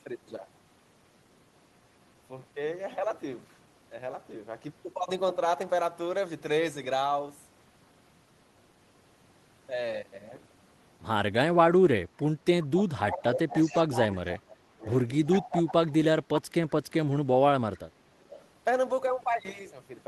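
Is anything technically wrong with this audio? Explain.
Yes. From 11.7 to 14.84 s, 15.39 to 16.49 s and 17.04 to 17.79 s, the voice dips and drops out in pieces, at worst by about 30 dB, for roughly 2 s in the first stretch and under a second in each of the others. This is speech suppressed in double talk, likely from an echo canceller that couldn't separate this talker from loudspeaker echo while both sides spoke, and so turned everything down.

A delayed copy of the voice trails the original by 365 ms at 13.12 to 14.33 s and 15.25 to 15.49 s, about 10 dB below the speech, and again at 18.2 to 18.41 s, about 25 dB below. This is echo leak, likely from a loudspeaker-side echo canceller letting part of its microphone pickup through and sending it back down the line.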